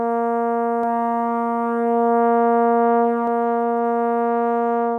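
A second path or an out-of-step edit has most likely fed the same music into the mix twice, creating a doubled audio track from 0.83 s to 3.27 s. A full-band copy trails the original by roughly 0.7 s at about 5 dB lower, with no decay or room colour, so passages repeat as a flat, dry second layer. It cuts in abruptly at 0.83 s and drops out just as suddenly at 3.27 s.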